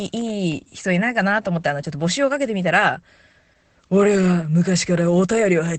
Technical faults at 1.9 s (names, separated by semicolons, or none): Opus voice compression